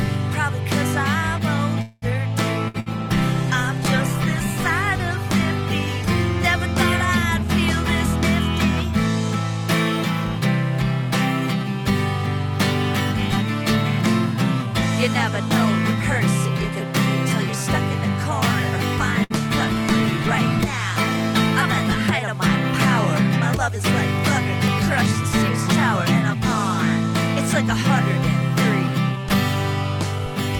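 At 1.81 s the sound stretches into a fading buzz or hiss for about 0.2 s, then resumes where it stopped, with nothing missing. This is a call audio freeze, likely from delayed packets that emptied the jitter buffer.

At 2.68 s and again at 2.80 s, a held buzz or fading hiss lasting about 60 ms each time replaces audio that never returns. These are bursts of packet loss: late or lost packets were concealed, and the content in those gaps is gone.

From 2.73 s to 9.34 s the sound turns watery and muffled, with the highs cut. This is a call bitrate drop, consistent with the encoder being pushed from around 96 kbps to about 20 kbps after the call's bandwidth estimate fell.

From 19.11 s to 22.06 s the same coarse, dulled quality returns in a second call bitrate drop, this time pointing to roughly 28 kbps. Within it, at 19.24 s, another packet loss burst leaves a brief fading buzz or hiss and about 60 ms missing.

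From 23.68 s to 30.20 s the audio runs about 2% fast at unchanged pitch. This is a jitter buffer speed-up: the receiver trimmed short pitch-period slices, about 150 ms in total, to shrink an overfull buffer.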